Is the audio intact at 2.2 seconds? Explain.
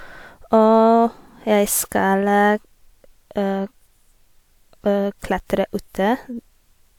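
Yes, at 2.2 seconds the speech plays through cleanly, with no dropout, click, distortion or other fault.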